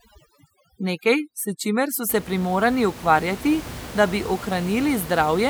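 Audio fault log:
0.0–2.09 s, overdone noise removal: the denoiser clamps bands near its noise estimate, leaving twinkly near-silence until "se primorani ukvarjati da".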